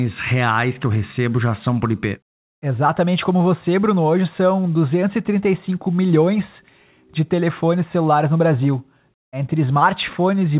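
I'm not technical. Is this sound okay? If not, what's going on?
Yes, there's nothing wrong with the signal: it has come through an ordinary phone-style call connection, which keeps nothing above about 4 kHz, so the sound is a little narrow, the way a normal phone call is.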